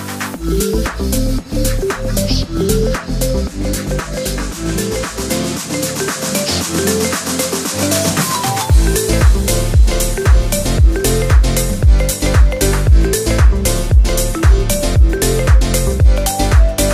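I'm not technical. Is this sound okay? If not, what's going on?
Yes, nothing in this sound stood out as a problem when I listened to it.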